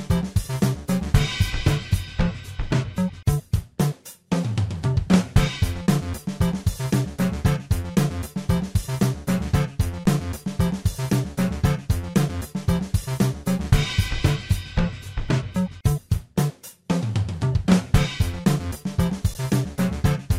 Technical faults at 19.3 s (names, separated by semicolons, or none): underrun with held sample